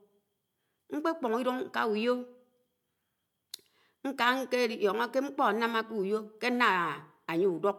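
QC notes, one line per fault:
No faults heard anywhere in the speech.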